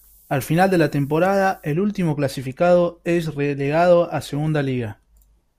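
From the start to 1.73 s, just before "último clasificado es relegado", the speech shows low bit depth with noise shaping. The audio is quantized to what sounds like about 9 bits, and the rounding error is pushed upward in frequency, leaving a steady, thin hiss roughly 30 dB below the speech that brightens sharply toward the top of the band. A spectrogram shows a constant noise floor climbing with frequency, strongest near the upper edge and persisting through pauses.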